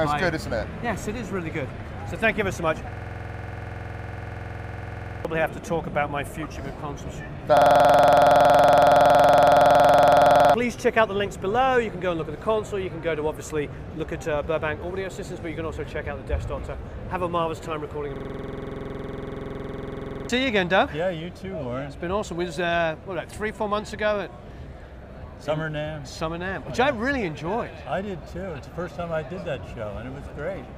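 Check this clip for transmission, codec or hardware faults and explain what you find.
There are three system hang loops. They run from 2.93 to 5.25 s, 7.57 to 10.54 s, and 18.16 to 20.29 s. In each, one 46.44 ms piece of sound repeats exactly, 21.5 times per second. That length fits a 2048-sample buffer. The system froze while the sound hardware kept replaying the same ring buffer. The first and third stalls lose around two seconds of audio each. The second loses around three.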